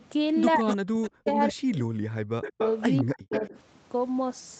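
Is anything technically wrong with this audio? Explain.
Yes. The speech has two call-processing faults.

Echo leak is audible as a faint trace at 0.0–0.05 s, then from 0.67 to 1.3 s nearly as loud as the speech, and from 2.42 to 3.47 s about 10 dB down. It is a distinct copy lagging by a fixed 183 ms, not a smooth reverberant tail. Likely cause: the far end's echo canceller let its loudspeaker pickup through.

Speech suppressed in double talk occurs from 0.56 to 2.6 s and again from 3.02 to 3.55 s, about 1.8 s in total. The speech dips by up to around 40 dB in pieces, coinciding with the other side talking. That pattern sets it apart from packet-loss dropouts, which are clean gaps unrelated to the other talker. Likely cause: the echo canceller could not separate the talker from the echo and turned both down.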